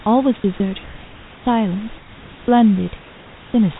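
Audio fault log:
0.40–0.44 s, sound dropped by the voice detector: for 40 ms the speech gives way to a flat, steady hiss, and about 20 ms of actual speech sound goes missing before the signal returns. The likely cause is the sender's voice detector misjudging part of the speech as background, stopping transmission, and the receiver filling the gap with synthetic comfort noise. Unlike a plain background swap, speech content is lost here.
1.98–2.48 s, comfort noise in place of the background: for half a second, in a pause where only room noise sits about 25 dB below the loudest speech, the real background is replaced by a smooth, featureless noise roughly 3 dB quieter. This is likely discontinuous transmission, where the receiver generates noise shaped only approximately like the room. Unlike the dropout above, no speech is cut. Only the texture and level of the background shift, and the original room noise, band-limited below 4 kHz like the rest of the call audio, returns afterward.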